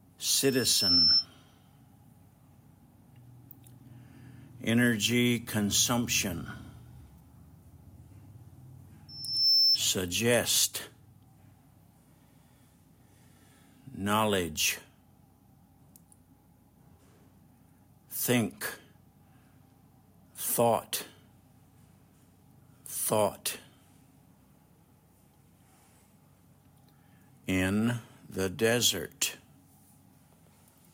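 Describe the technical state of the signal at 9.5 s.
Loudspeaker feedback squeal runs from 9.08 to 9.80 s, so 9.5 s falls within it. A microphone is picking up the loudspeaker it feeds, and at 5.3 kHz the gain around that loop exceeds unity, so the tone reinforces itself on every pass. It swells over roughly 0.4 s into a single-pitched whistle that sits about 5 dB above the surrounding sound before it stops.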